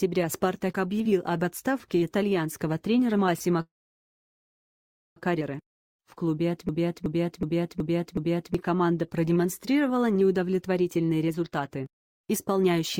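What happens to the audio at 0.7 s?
Nothing goes wrong at 0.7 s; the audio is intact at that point.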